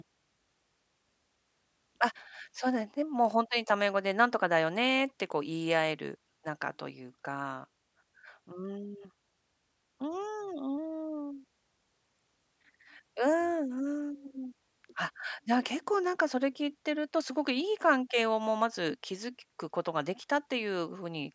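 Nothing in the recording stands out as a technical fault, so there's nothing here to point to.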